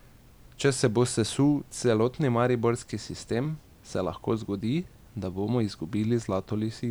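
No technical faults can be heard anywhere in the recording.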